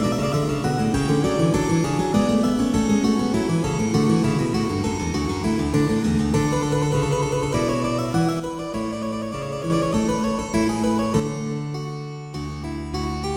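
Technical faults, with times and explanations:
8.40–9.70 s and 11.20–12.94 s, one channel drops out: in both spans the whole sound steps down abruptly by about 6 dB, holds at that lower level, then jumps back up. The likely cause is one side of a stereo feed going silent. Once the two channels are summed to mono, material common to both loses half its contribution, which gives exactly this 6 dB fall, and anything carried only by the missing side vanishes during each gap.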